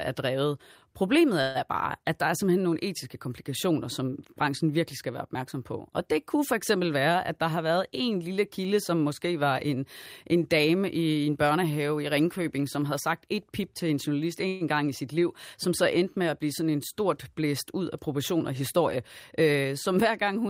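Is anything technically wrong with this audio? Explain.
Yes. At 1.41 to 1.57 s, just before "er bare at der", and again at 14.48 to 14.63 s, between "pip til en journalist" and "gang i sit liv", the speech stalls into a brief fading buzz of about 130 ms, then resumes exactly where it stopped. This is a call audio freeze, likely from delayed packets draining the jitter buffer, with the receiver stretching the last sound until they arrived.

From 6.96 to 8.75 s, between "det kunne for eksempel" and "som måske var en", the speech runs about 7% fast, and from 18.40 to 19.66 s about 10% fast, sounding hurried at unchanged pitch. This is jitter buffer speed-up: with surplus audio queued, the receiver trimmed tiny pitch-period slices, roughly 150 ms in each stretch, to reduce delay.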